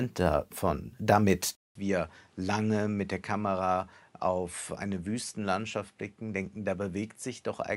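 Input switched to a poorer device at 1.55 s: after a 200 ms gap, nothing remains above 11.4 kHz, the level drops slightly and faint new noise appears, likely a change of microphone.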